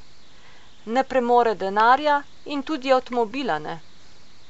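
No technical faults can be heard anywhere in the recording; the speech signal stays continuous and steady throughout.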